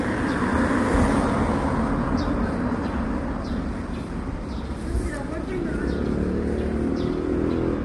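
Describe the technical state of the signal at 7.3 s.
At 7.3 s the sound is grainy and rough, with noise filling the gaps between tonal components and nothing above 11.5 kHz, as throughout the clip. This points to low-delay AAC compression, likely AAC-ELD, whose short frames resolve harmonics poorly at a low bitrate around 32 kbps.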